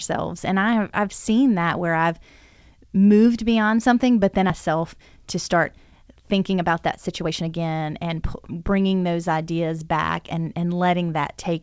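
At 4.50 s, right after "beyond something but then", there is a skip ahead. About a second of speech is dropped and the two sides are joined with no silent gap. That separates it from a dropout or packet loss concealment, which would leave silence or a smeared fill.

From 4.68 s to 8.93 s comes a jitter buffer speed-up. The receiver had built up excess delay and trimmed it by repeatedly cutting out pitch-period-sized slices, about half a second in total. The speech runs at about 111% of normal speed and sounds hurried, but the pitch stays the same. A resampling error would raise the pitch along with the speed. Throughout, the G.722 call path's band limit leaves nothing above 8 kHz.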